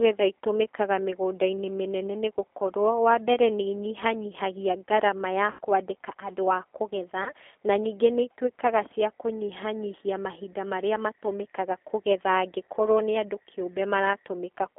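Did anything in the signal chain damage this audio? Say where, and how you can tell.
Yes. At the codec stage the whole clip has that rough, synthetic G.729 sound, and the band sits at about 250 Hz to 3.4 kHz, which fits an 8 kbit/s VoIP link.

On the network side there's VoIP packet loss concealed by the speech codec: after "nĩ inyihanyihagia ngarama ya" (5.51–5.59 s, about 80 ms lost) and after "kwandĩka andũ a kũgetha" (7.24–7.32 s, 20 ms), the decoder stretches its last frame into a fading buzzy tone or coloured noise.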